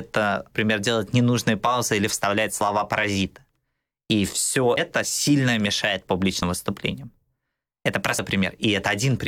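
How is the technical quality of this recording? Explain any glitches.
The recording has two kinds of glitch: a few short digital blips and a couple of tiny skips.

First, damaged data in a compressed stream, at 0.54 s (just before "делать ненужные паузы или"), 4.76 s (right before "сильно мешает") and 8.18 s. Each time a chunk of the encoded file is corrupt, so the decoder can't read those frames, loses sync and hunts for the next valid header. You hear a brief blip, about 14 ms long.

Second, audio missing between chunks, at 2.61 s and 6.42 s (the second just after "сильно мешает"). Those two points are about 4 s apart. The likely cause is a recorder working in blocks and dropping a short slice while it closes one block and opens the next. Roughly a twentieth of a second vanishes each time, and the two sides are butted together with no gap. It comes across as a quick skip in the speech.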